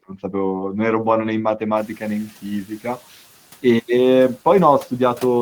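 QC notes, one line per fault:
0.09–0.34 s, speech cut by the noise suppressor: the suppressor mistook low-level speech energy for background and pulled it down with the noise, by about 9 dB at its deepest, over roughly a tenth of a second in total, so those sounds come across swallowed and faint.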